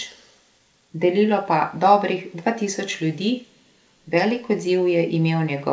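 No technical faults can be heard in this speech.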